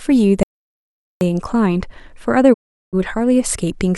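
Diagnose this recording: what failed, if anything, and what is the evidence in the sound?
The input feed to the recorder most likely dropped out, perhaps through a lost connection or mute, while recording carried on writing silence. That is an audio dropout to silence. At 0.43 s the speech stops abruptly, and until 1.21 s, about 0.78 s, there is silence with no room tone or noise floor underneath. The sound then resumes mid-flow, and whatever was spoken in that window is simply absent.

In the broadcast reception and decoding stage, the receiver lost valid frames and muted its output until clean data returned. That is a digital broadcast dropout. At 2.52 s the speech fades out over roughly 20 ms rather than cutting hard, stays silent for 384 ms, and comes back at 2.95 s. The length fits a run of about a dozen 32 ms frames failing their checks, and the programme content sent during that hole is lost.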